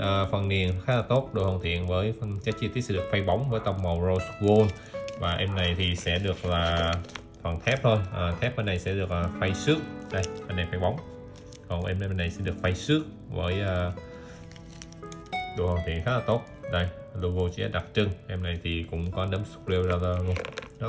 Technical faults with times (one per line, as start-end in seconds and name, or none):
0.00-20.89 resampler restarted on every block